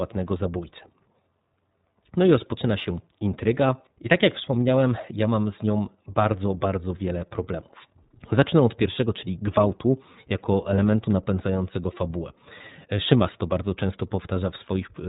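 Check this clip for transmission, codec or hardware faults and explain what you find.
One codec fault runs through the whole speech clip: iLBC coding. It is audible from start to finish, with no separate dropouts or glitches on top of it.

iLBC codec, throughout: the audio has been squeezed through this narrowband VoIP coder, and the damage is plainly audible. Nothing above 4 kHz survives, so the speech sounds boxed-in and dull. Each frame's excitation is coded on its own, giving a rough, slightly synthetic grain; the frames here are 30 ms, which fits the codec's 13.33 kbps mode.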